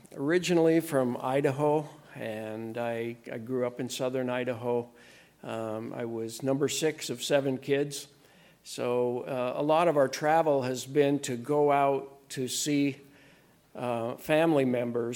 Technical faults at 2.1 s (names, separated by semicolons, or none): none